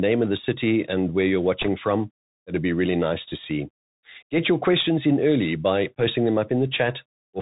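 From the first second to the last, the speech carries the sound of a Bluetooth CVSD headset codec. The damage is plainly audible. Everything above 4 kHz is missing, so the speech sounds boxed and narrow. A fine granular hiss sits under it. Sibilants come out scratchy, and louder bright sounds smear where the encoder's adaptive step cannot keep up. That one-bit, up-or-down coding fits a 64 kbps CVSD stream.

From 1.62 to 1.68 s, just after "city and where you're", bit errors on the Bluetooth voice link break in. They sound like a brief rushing crackle laid over the speech, with no sharp click. In CVSD each bit moves the signal only one small step, and the error fades as the step size re-adapts. The density of the crackle points to roughly a couple of percent of bits flipped.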